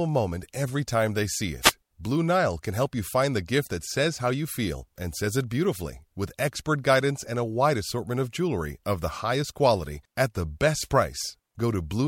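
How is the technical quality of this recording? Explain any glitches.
The recording has two brief noise hits. Short swishes of static, each about a tenth of a second, are wireless microphone noise hits, at 1.62–1.72 s after "every time they see" and 10.76–10.88 s after "highest quality at the". They happen when the radio signal fades and receiver noise briefly covers the speech.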